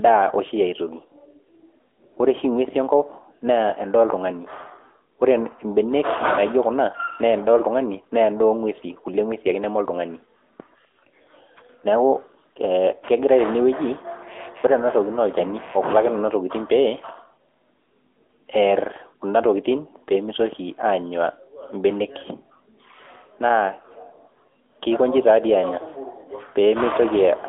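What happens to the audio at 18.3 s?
At 18.3 s the speech carries the AMR narrowband mobile codec, which runs through the whole clip rather than starting there. The signal is squeezed into a phone-line band of roughly 250 Hz to 3.6 kHz, with nothing above 3.8 kHz. A vocal-tract model rebuilds the voice frame by frame, and the damage is plainly audible as a buzzy, synthetic edge, consistent with a mid AMR-NB rate near 10 kbps. A plain telephone band-pass filter would dull the voice without that coded, artificial texture.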